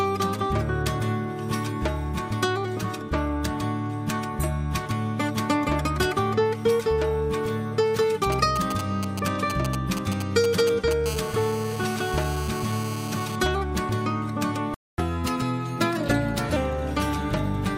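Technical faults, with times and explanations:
8.23–11.08 s, GSM signalling bursts: A galloping dit-dit-dit of short raspy buzzes cuts across the sound, sitting roughly 10 dB below it and unrelated to it. A nearby 2G handset is exchanging control traffic with the network, sending brief clusters of radio pulses at about 217 Hz rather than a continuous stream. The audio circuitry rectifies each cluster, turning the radio envelope into audible fragments of buzz.
11.08–13.36 s, GSM phone buzz: The intermittent gallop turns into a steady, harsh, rasping buzz at 217 Hz, rich in harmonics and about 14 dB below the sound. The handset has moved into an active call, so it now transmits its time-slot bursts continuously, 217 times a second. The audio path demodulates that pulse train into a constant tone whose sharp edges produce the long ladder of overtones.
14.74–14.98 s, playback stall: The sound drops out abruptly in mid-flow for about 0.24 s, leaving a clear gap, and then resumes. 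The output went silent because the player stopped delivering samples for that stretch, likely because its buffer ran empty or its audio thread was held up. Once data flowed again, output restarted.
14.98–16.56 s, catch-up at higher speed: Right after the gap, the sound runs noticeably fast and bright for about 1.6 s, about 1.15 times normal speed and around two semitones sharp, before settling back to normal. The player is working through the backlog that built up during the stall. It resamples that audio to play faster, and because speed and pitch are tied together in resampling, both rise until the lost time is made up.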